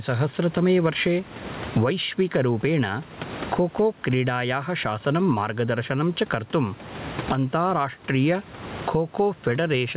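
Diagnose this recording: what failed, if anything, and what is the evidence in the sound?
What failed is the input level, and you can hear gain pumping right through the speech. The room noise sits about 30 dB under the speech, and the gain swings by around 25 dB. Loud and quiet bits come out squashed together. The likely cause is mic gain set way too hot, with a fast limiter or AGC in the call processing clamping every peak. The band-limit at 4 kHz fits a G.711 call leg.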